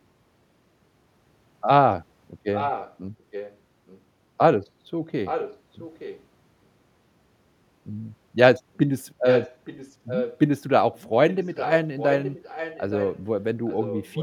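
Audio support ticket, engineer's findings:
Delayed duplicate of the speech trailing about 870 ms behind at 2.54–2.95, 3.31–4.0, 5.25–6.24, 9.24–10.38, 10.94–13.23 and 13.68 s to end; at times nearly as loud as the direct speech, at times faint. Echo leak: likely far-end loudspeaker pickup not removed by its echo canceller and returned.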